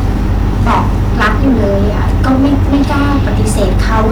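Hard clipping runs through the whole recording. The speech has been driven roughly 10 dB past the ceiling of a stage in the chain, so every loud peak is sliced off flat, and about a tenth of the samples sit against that limit. Those squared-off tops generate strong high harmonics that were never in the original signal. With overload this heavy, the result is a continuous harsh fuzz on every louder syllable rather than occasional crackle.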